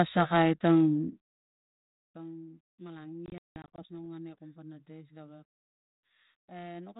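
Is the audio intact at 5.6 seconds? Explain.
No. Right after "kom pana dais gawek", packet loss on an ADPCM call cuts a hard-edged 200 ms silent gap from 5.48 to 5.68 s, about ten packets' worth. The decoder's predictor and step size drift from the sender's, so speech resumes with brief, slight distortion.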